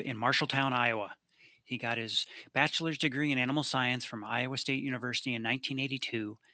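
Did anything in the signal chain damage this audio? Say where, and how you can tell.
No, nothing in the signal chain has damaged this speech recording. The only background is the room's own noise, sitting about 54 dB below the speech, which belongs to the recording space rather than to any stage of the system.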